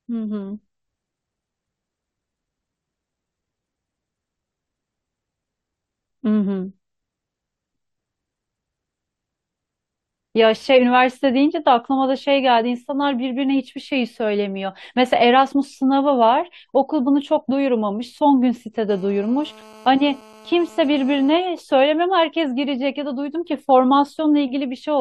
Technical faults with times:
18.90-21.31 GSM phone buzz

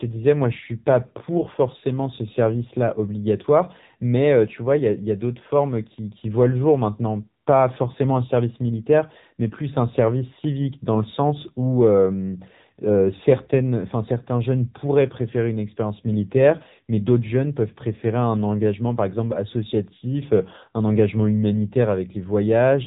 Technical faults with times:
0.00-22.86 AMR narrowband mobile codec

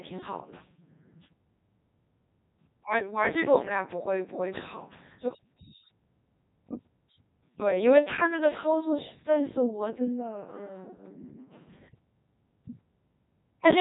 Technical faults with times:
0.00-13.80 Codec 2 vocoder

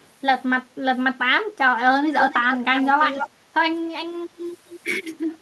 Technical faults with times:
0.02-0.06 echo leak
2.19-3.29 echo leak
3.30-3.54 background gated by the echo canceller
4.48-4.73 echo leak

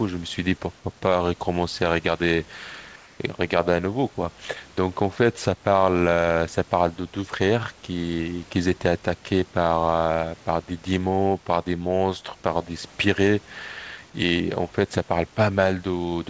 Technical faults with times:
2.96-3.20 comfort noise in place of the background

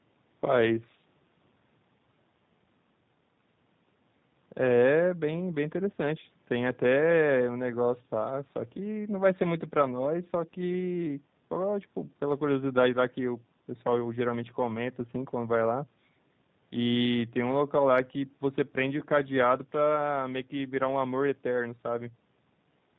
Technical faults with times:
0.00-22.99 G.729 codec

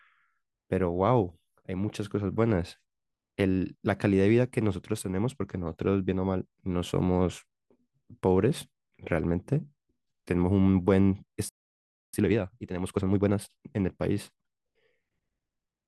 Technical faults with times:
11.49-12.13 playback stall
12.13-13.41 time-compressed catch-up

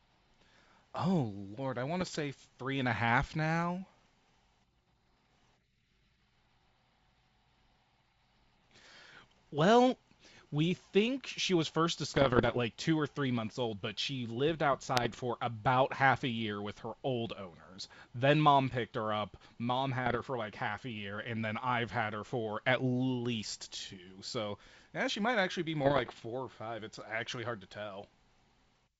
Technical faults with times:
2.00-2.16 bit errors on an ADPCM link
12.11-12.61 bit errors on an ADPCM link
14.96-15.20 bit errors on an ADPCM link
20.06-20.21 bit errors on an ADPCM link
25.81-26.23 bit errors on an ADPCM link

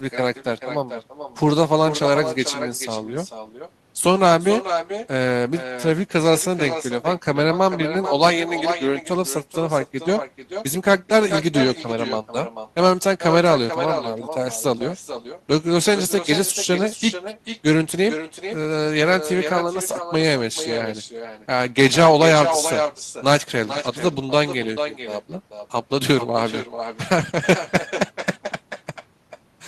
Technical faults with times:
0.00-29.67 echo with no canceller

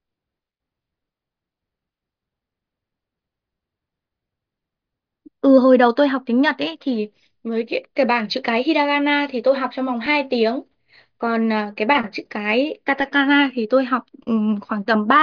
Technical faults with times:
none

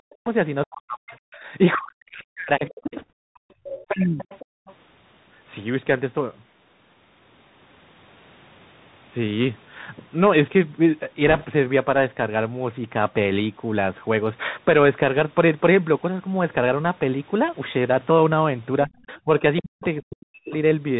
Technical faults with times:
0.00-20.99 Bluetooth CVSD headset codec
0.00-4.24 speech suppressed in double talk
0.25-4.74 other side's voice leaking through
1.38-1.43 background gated by the echo canceller
2.98-3.11 bit errors on a Bluetooth voice link
3.23-4.66 background gated by the echo canceller
11.27-11.46 bit errors on a Bluetooth voice link
18.85-20.54 speech suppressed in double talk
19.08-20.02 other side's voice leaking through

